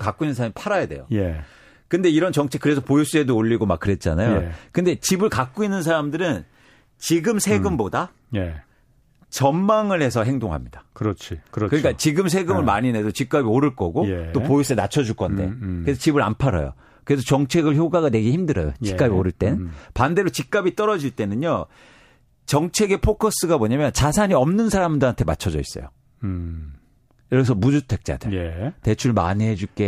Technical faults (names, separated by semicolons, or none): drift correction step